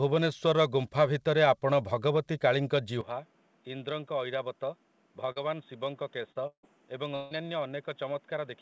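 At 3.01 s the speech abruptly turns dull and boxy with no gap. Nothing above 3.8 kHz remains, the level falls by about 10 dB, and a new noise floor appears roughly 30 dB below the speech. This lasts to the end and is likely an input switched to a poorer device.

At 5.32 to 5.39 s and 6.32 to 6.38 s, brief smears replace about 40 ms of sound each. This is short concealed packet loss, where the receiver extended the preceding sound to cover the missing audio.

At 6.47 to 6.66 s and 7.15 to 7.34 s, the sound stretches into a fading continuation of the last sound for about 160 ms, and the first instance ends with about 80 ms of silence. This is likely a long network dropout, with concealment spanning the lost stretch. Beneath all of this runs the G.722 call path, which itself cuts off above 8 kHz.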